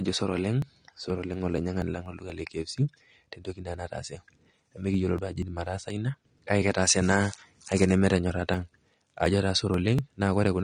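AAC compression runs through the whole speech clip. Nothing is present above 9.7 kHz, and the speech is audibly dulled and smeared, with fizzy sibilants. This is likely AAC-LC at a low bitrate, about 32 kbps, where the coder drops high frequencies and coarsely quantises the rest.

Periodic USB or driver dropouts occur from 0.14 s to 10.46 s, once every 0.24 s, about forty times in all. Each time, something blocks the audio path and roughly 10 ms of sound is skipped. This produces a steady train of ticks while speech is present.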